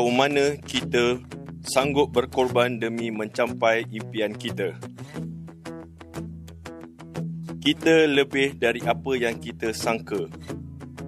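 A worn or dirty contact in the signal chain briefly makes and breaks, producing loose connector crackle from 0.69 to 0.84 s: the audio is chopped into an irregular burst of scratchy crackle lasting about 0.15 s near the start.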